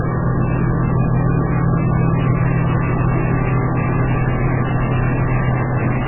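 Heavy MP3 compression damage runs throughout: nothing is left above 3 kHz, and weak detail flickers in and out, giving a watery, swirly texture with smeared attacks. This is likely from an encoder starved of bits, which fits a rate around 8 kbps.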